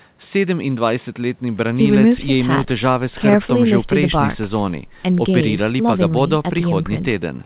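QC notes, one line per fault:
No faults heard.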